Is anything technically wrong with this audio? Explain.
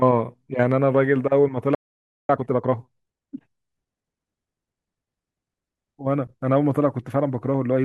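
Yes, there are two faults. At 1.75 s the speech cuts out for about 0.54 s, a playback stall, likely from the player running out of data or its thread blocking. From 2.29 to 3.37 s comes time-compressed catch-up: the player trims its backlog by splicing out small segments, so speech runs about 1.5 times faster at normal pitch.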